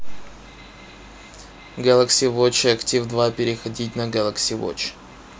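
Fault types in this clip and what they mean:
No technical faults can be heard in this speech recording. There is nothing to list for it.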